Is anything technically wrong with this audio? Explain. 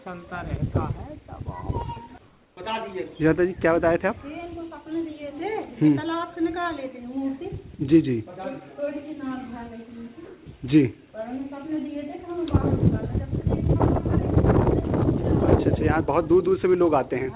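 Yes. From 2.27 to 2.57 s and from 10.25 to 10.46 s, comfort noise replaces the background. The gaps are likely discontinuous transmission, with the receiver filling each pause with steady, featureless synthetic noise, about 3 dB quieter in the first and about 3 dB louder in the second.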